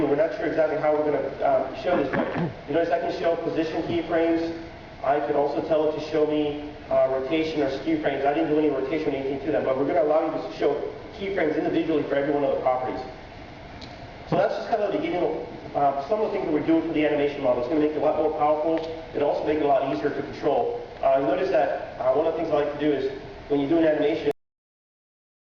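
At 24.31 s the audio shows a cut-off end: it stops abruptly mid-sound and falls straight to digital silence with no natural decay, holding that silence for the final 1.2 s. The last buffers of audio were never written or played out.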